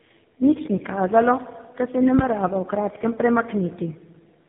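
From start to end the speech carries tandem speech coding: it was decoded and re-encoded through three speech coders in a row, which fits a chain like GSM full rate twice, then AMR-NB. Each stage compounds the last, so the speech sounds rough, muffled and warbly, with nothing above 3.8 kHz. That stacked damage is harsher than a single narrowband codec would leave.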